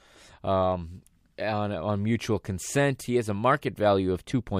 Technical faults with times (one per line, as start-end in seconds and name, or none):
none